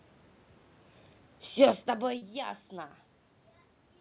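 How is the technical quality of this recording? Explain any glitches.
Two glitches stand out, both between 1.6 and 2.5 s. The audio also has audible room noise and a telephone-band sound with nothing above 4 kHz, which fits G.711 A-law at 64 kbps on a call path.

Automatic gain falling, from 1.59 to 2.50 s: the automatic gain control judged the input too loud or its background noise too strong and eased its gain down by about 4 dB over roughly nine-tenths of a second. The sound and its background room noise sink together, distinct from the talker's own shift in distance around 1.5 s.

Short concealed packet loss, from 2.18 to 2.24 s: about 40 ms of audio arrived too late for the decoder, and the receiver synthesised roughly 35 ms to cover the gap by extending the preceding sound before blending back into the real signal. It comes across as a brief smear or wobble in the middle of the gain drop.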